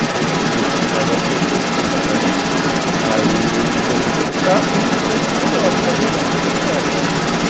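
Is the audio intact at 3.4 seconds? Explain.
No. Across the whole clip, from 0.0 to 7.49 s and so at 3.4 s, the other side's voice is leaking through, likely because the echo canceller left the far end's loudspeaker sound in the microphone. That second voice sits a few decibels above the main speech.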